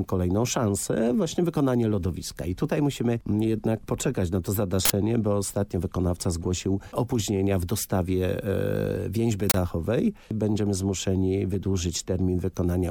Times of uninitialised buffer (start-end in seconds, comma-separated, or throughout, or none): 4.85-4.90, 9.50-9.54